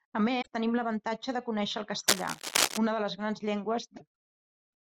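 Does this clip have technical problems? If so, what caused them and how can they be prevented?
Yes. At 0.41 to 0.47 s, just before "tenim l'avantatge de conéixer", and at 3.96 to 4.02 s, after "una de les grans", the speech skips ahead. This is likely a broken MP3 bit reservoir. Frames of about 26 ms were dropped, so the next frames decoded borrowed bytes belonging to other frames. Cutting or streaming MP3 only on whole-frame boundaries, with the reservoir intact, prevents it.

From 2.08 to 2.78 s, between "l'avantatge de conéixer el" and "una de les grans", dense uneven rustling sits over the speech at roughly the same level. This is cable scratch noise, likely from a worn cable or connector being moved. Its irregular, gritty bursts set it apart from steady hiss or hum. Replacing or securing worn cables and connectors before recording prevents it.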